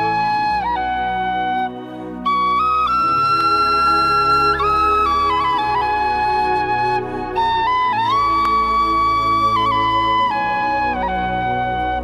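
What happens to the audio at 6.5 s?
Nothing goes wrong at 6.5 s; the audio runs through that moment intact, with no dropout, click or distortion.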